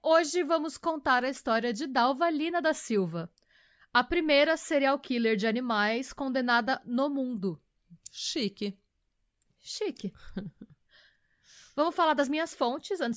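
A speech recording, and nothing in it is technically wrong.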